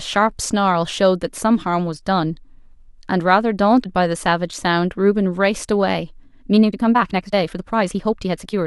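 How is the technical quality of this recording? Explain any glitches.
The recording has two glitches.

At 3.83 to 3.86 s, the speech jumps ahead with a brief glitch. This is likely a broken MP3 bit reservoir. Frames were cut, so the next frame borrowed data that was no longer there. The gap spans about one 26 ms frame.

From 6.46 s to the end at 8.66 s, the speech suddenly runs 1.5 times faster while its pitch stays unchanged. It sounds rushed. This is likely a time-stretched section, where short pieces were dropped to squeeze the audio.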